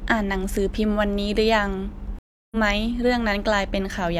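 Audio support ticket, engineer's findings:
Speech cuts to silence 2.19–2.57 s (0.33 s), resuming roughly 0.2 s further on. Stream reconnect: connection dropped, player rejoined mid-stream with a fresh decoder, skipping ahead.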